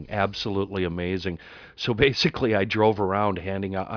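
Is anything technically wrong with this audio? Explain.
No, no technical faults.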